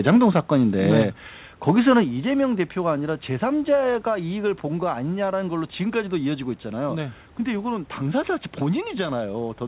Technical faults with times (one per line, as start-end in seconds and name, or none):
0.07-0.39 microphone overload
0.88-1.02 microphone overload
1.02 microphone volume stepped down
1.68-1.98 microphone overload
2.04 microphone volume stepped down